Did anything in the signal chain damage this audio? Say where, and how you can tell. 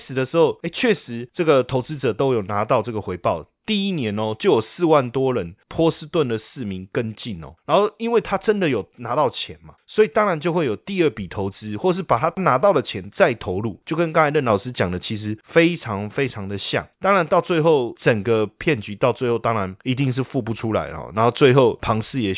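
No, I can't hear anything in this speech recording that points to damage at any stage of the chain, so there's nothing here to trace back.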